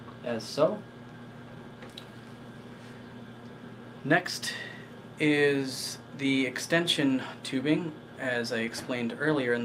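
The signal holds steady throughout, with nothing heard that points to a problem in how the audio was captured, processed or delivered.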